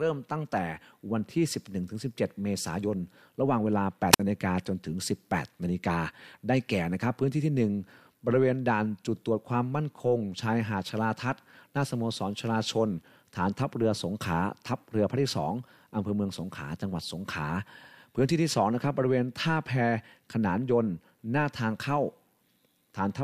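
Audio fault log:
4.12–4.20 s, wireless microphone squelch dropout: hiss swells, then the receiver's squelch mutes the speech for about 55 ms as the radio signal fades.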